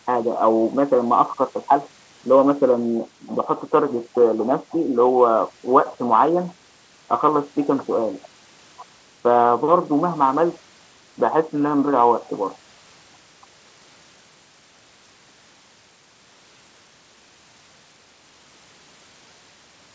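Nothing goes wrong anywhere in this speech; the only thing to notice is that nothing sits above 8 kHz, which fits the G.722 codec of an ordinary call path.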